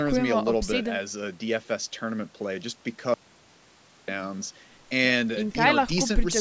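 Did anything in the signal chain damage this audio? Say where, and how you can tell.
Yes: an audio dropout to silence from 3.14 to 4.08 s, roughly 0.94 s of silence with no room tone, likely an input or link loss upstream of the recorder.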